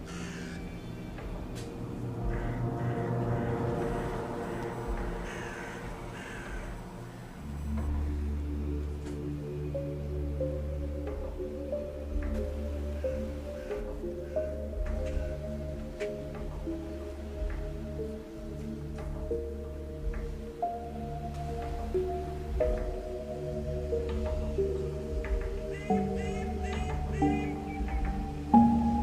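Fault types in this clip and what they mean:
USB whine: a steady, thin whistle at a fixed 1 kHz sits under the sound from 3.78 s to 7.88 s, roughly 30 dB below it, holding the same pitch throughout. The pitch gives away the cause: a USB bus pulls current in bursts once every 1 ms frame, and that 1 kHz ripple has leaked into the audio path through a shared power supply or ground connection.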